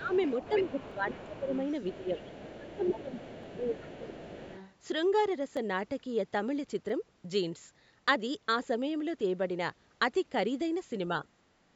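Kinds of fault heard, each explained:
Speech suppressed in double talk: at 0 to 0.13 s, 0.49 to 1.5 s, 1.91 to 2.21 s and 2.56 to 4.49 s, the talker's speech sinks by about 15 dB, about 10 dB in the second stretch. During the longest stretch, roughly one and a half seconds of it is held down. Another voice is present at the same moments, so this is likely an echo canceller that could not tell the talker apart from the loudspeaker echo and turned both down.
Other side's voice leaking through: from 0.04 to 1.99 s and again from 2.18 to 4.72 s, a second, fainter voice sits under the talker at about 20 dB below the main speech. It likely comes from the far end, played on the talker's loudspeaker and picked up again by the microphone, with the echo canceller leaving part of it in place rather than removing it fully.
Dropped samples: single sharp clicks at 0.91, 3.43, 5.57 and 6.89 s, each a thin vertical line across the spectrum. 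At each point a fraction of a millisecond of the waveform is missing. That is far too little to remove any sound, but enough that the signal jumps abruptly from one value to a later one, likely because a handful of samples were lost in the stream.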